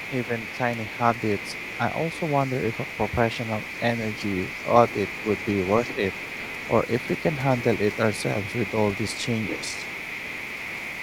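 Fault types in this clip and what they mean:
Other side's voice leaking through: a second, quieter voice sits about 15 dB under the speech from 0.0 to 0.59 s, 0.75 to 0.98 s, 1.14 to 7.4 s and 7.56 to 11.02 s, with only short breaks between. It is likely the far end playing on the talker's loudspeaker and left behind by the echo canceller. Unlike room reverberation, it is a separate voice, not a delayed tail of the talker's own sound.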